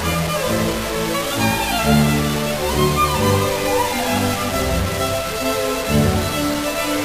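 Throughout, grainy distortion rides on the sound, gritty in quiet stretches and sputtering at the softest points. The likely cause is low bit depth without dither: truncation to what fits 4 bits, with error about 10 dB down. Waveforms show stair-steps; spectrograms show hash tracking the sound.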